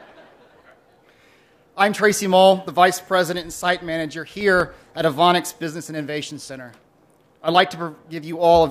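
From 3.42 s to 5.00 s there is a run of CD scratch ticks: nine short clicks, spaced regularly at roughly six per second, each lasting no more than a couple of milliseconds. On every rotation the disc passes a scratch or blemish that wipes out more data than its error correction can restore, so the player conceals the gap by interpolating or muting those samples. That concealment breaks through the sound as a steady tick pattern locked to the disc's rotation.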